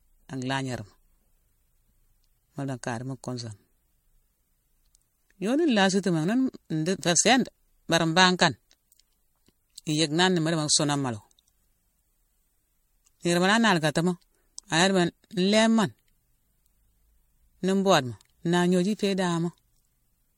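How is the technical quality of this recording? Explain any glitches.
The speech has one fault throughout, generation loss. Across the whole clip it sounds swirly, hollow and smeared, with blurred attacks and no content above 16.5 kHz. The likely cause is about five MP3 encoding passes at roughly 64 kbit/s, each one requantising on a shifted frame grid.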